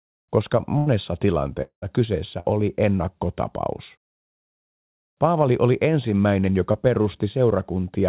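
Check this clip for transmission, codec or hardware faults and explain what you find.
Four transmission faults break up this speech clip, all of them gaps in delivery that the receiver papered over. The whole clip is band-limited, with nothing above 4 kHz, as expected of a G.711 mu-law call path.

Burst of packet loss, 0.78 to 0.88 s: the speech stalls into a held buzz or fading hiss for about 80 ms and then jumps ahead, with a short piece simply absent. Several consecutive packets never arrived in time. The receiver stretched the last sound it had received across the hole, lowering it as the gap grew, then resumed the real audio further along the stream.

Long network dropout, 1.62 to 1.84 s: the sound smears into a decaying buzz or hiss, and the last 90 ms or so fall to silence before the speech returns about 200 ms later with that stretch gone. The cause is likely a dropout in which nothing reached the receiver for around a fifth of a second. 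The receiver's fill ran out of energy before real audio came back.

Short concealed packet loss, 2.40 to 2.46 s and 6.72 to 6.76 s: each is a brief smear or wobble rather than a clean gap. The first spans about 40 ms of lost audio and the second about 20 ms. The receiver synthesised a continuation of the preceding sound, pitched if voiced and noise-like if not, then cross-faded back into the real signal. A short consonant in either spot could be swallowed.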